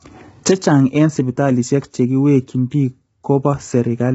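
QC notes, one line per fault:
Throughout: low-delay AAC compression. The speech is rough and grainy with nothing above 7.8 kHz, likely AAC-ELD, whose coarse coding leaves noise between the harmonics at a bitrate that fits 16 kbps.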